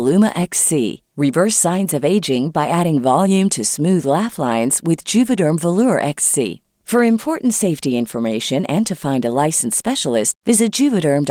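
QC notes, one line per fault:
No faults found in this speech clip. The Opus voice compression leaves only light coding traces, and its hybrid mode keeps the full audio band.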